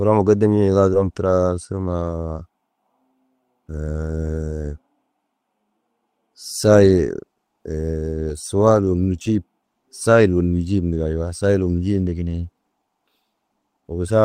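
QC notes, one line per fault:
0.93–0.95 s, skip ahead: about a second of speech never plays. Playback jumps straight from one point to a much later one with no silence in between, so the phrase breaks off and resumes mid-stream. Later audio was already queued, and the dropped stretch was discarded rather than waited for. On a waveform the envelope changes abruptly at the join with no flat gap. On a spectrogram the harmonic and formant tracks end and restart at different positions along a single vertical line.
1.03–2.03 s, jitter buffer speed-up: for about a second the speech runs roughly 9% fast while keeping its normal pitch, so it sounds hurried. The receiver's buffer held more audio than its target. To shrink that delay, it cut many short pieces, each one or a few pitch periods long, for a total of about a tenth of a second. On a spectrogram the syllables look compressed in time while the harmonic spacing stays the same. 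On a waveform individual pitch cycles are missing at many small splices.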